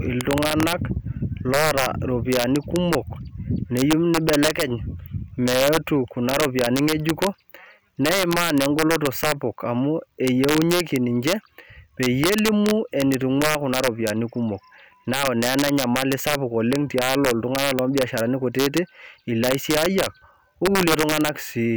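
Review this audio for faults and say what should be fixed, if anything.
Integer overflow runs throughout the speech: the gain drives peaks about 5 dB past the integer limit, and instead of being held there they wrap to the opposite sign, so a small fraction of samples jump across the full range and loud syllables crack violently, far harsher than clipping. Saturate sums and gain stages, or add headroom before conversion, so out-of-range values clamp rather than wrap.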